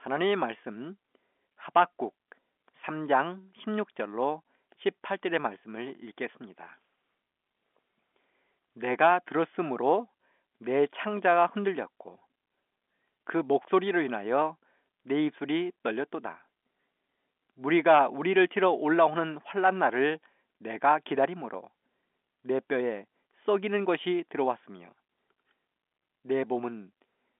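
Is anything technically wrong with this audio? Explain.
No, nothing technically wrong is audible here.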